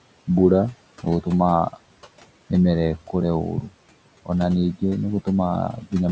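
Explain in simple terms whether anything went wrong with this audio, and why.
Something did go wrong: the whole clip carries noise suppressor artifacts. A call's noise suppressor keeps guessing which parts of the sound are steady background hiss and turns those down, moment by moment. Here it pushes the room noise down hard, so the background drops away in the pauses and creeps back under the speech. A plain noise gate would instead switch the background fully on and off, with no warble.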